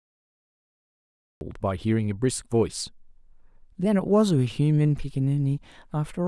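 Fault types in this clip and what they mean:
Cut-off start: digital silence runs from 0 to 1.41 s, then the speech enters abruptly mid-sound with no natural attack, as though capture began late. Unlike a fade-in there is no gradual rise, and unlike a dropout no audio precedes the silence.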